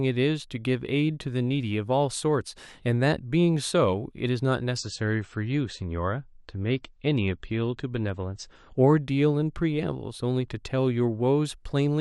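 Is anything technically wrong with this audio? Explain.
Yes. From 4.77 s to 8.77 s, the speech falls back to a lower-quality version of the stream. This is an adaptive stream at a lower bitrate. When the connection slows, the player switches to a smaller encoding rather than pausing. The sound fits a drop from 128 kbit/s MP3 to about 35 kbit/s. In that four-second stretch, nothing remains above 8.3 kHz, so the treble turns dull. The switches in and out are abrupt, with no gap.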